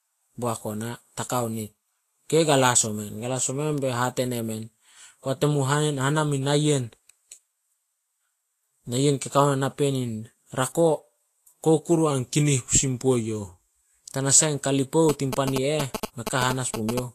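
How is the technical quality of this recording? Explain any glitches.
The recording has three problems: codec damage throughout, one stretch where the pitch drops, and a burst of phone interference near the end.

Across the whole clip the speech sounds plainly grainy and hissy, with nothing above 14.2 kHz. That's most likely Vorbis compression at a low setting, something around 36 kbps. The encoder keeps a smooth spectral outline but quantises the treble so coarsely that fine detail turns into noise.

From 12.11 to 13.74 s the speech runs about 5.6% slow and drops about 99 cents, roughly a semitone, then comes back up. That's likely a drift correction step, where clock-matching software changed the playback rate in one jump to manage its buffer.

From 15.09 to 16.99 s there's a galloping dit-dit-dit of short 217 Hz buzzes, roughly as loud as the speech. Those are GSM signalling bursts from a nearby 2G phone. 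The audio circuitry rectifies the radio bursts into audible buzzing.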